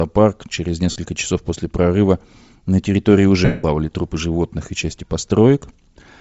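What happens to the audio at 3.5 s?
From 3.45 to 3.64 s, lost LE Audio frames leave a gap of about 0.19 s, which fits a run of 7.5 ms frames. The decoder keeps repeating the last good spectrum with randomised signs and fades it out. The speech becomes a hissy smear that dies away. On a spectrogram the harmonic striations give way to a flat, grainy band that dims across the gap. On the waveform the envelope tapers toward silence.

Around it, the speech has a breathy, grainy edge from Bluetooth LC3 compression at 32 kbps, likely the cause. The codec zeroes much of the upper spectrum and fills it with noise, which shows on a spectrogram as speckled, unstructured energy high up instead of clean harmonics.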